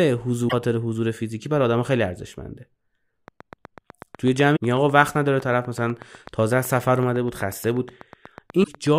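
From 3.28 s to 8.88 s a train of clicks runs under the speech: sharp, near-identical pulses at a steady rate of about 8 per second, some fifty in all. They are regular enough to sound like ticking rather than random crackle, stand up to roughly 5 dB above the speech peaks, and carry on through the pauses. Such a train of clicks is likely interference from nearby equipment or a faulty connection or power supply.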